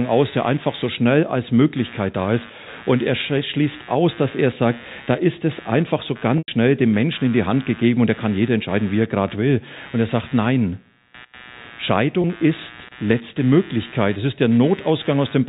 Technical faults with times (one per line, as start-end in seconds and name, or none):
0.00-15.48 computer activity noise
6.38-6.48 packet loss with pitch repetition
12.22-12.24 packet loss with pitch repetition